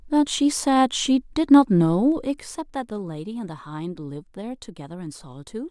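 From 2.05 to 3.07 s there's zipper noise: the level drops by about 10 dB, but in 2 dB jumps with no smoothing, around seven a second, so each jump clicks and you hear a ticking zip riding on the speech as it comes down.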